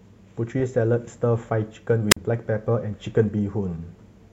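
At 2.10 to 2.17 s there's a wireless microphone squelch dropout: the radio link fades, a quick burst of hiss comes up, then the receiver's squelch mutes the output for about 44 ms, leaving a short hole before the speech comes back.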